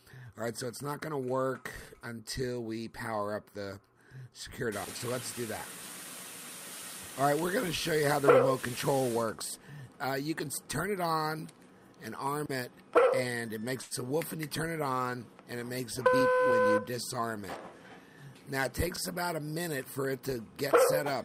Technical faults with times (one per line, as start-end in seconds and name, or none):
13.81-13.94 short stall from a late packet
16.07-17.20 jitter buffer speed-up